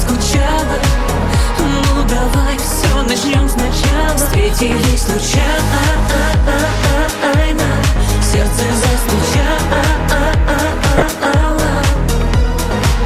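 The audio is dull throughout, with a gurgling, granular texture and upper bands that flicker in and out. This is plainly audible MP2 compression, likely at a rate around 80 kbps. Layer II divides the signal into 32 equal sub-bands and shares out bits among them. At this rate the top bands are repeatedly dropped and the remaining ones are quantised coarsely, which produces the muffled, grainy sound. Two short bursts of DAB burbling sit on top, from 4.60 to 4.74 s and from 10.90 to 11.06 s. Each is a brief patch of noise blips in individual sub-bands. This points to reception errors slipping past error correction into the MP2 data, at a bit error rate of a few tenths of a percent. The corrupted samples put short blips of noise into single bands. The second burst is slightly longer and spans more frames than the first.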